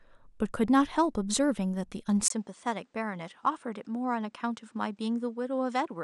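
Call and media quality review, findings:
Input likely switched to poorer device at 2.28 s: 20 ms gap, then speech capped at 9.8 kHz, about 5 dB quieter, new background noise about 45 dB below speech.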